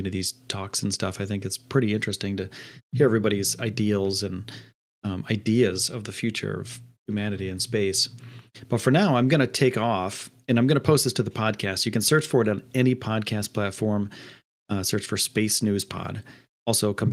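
No technical faults are audible.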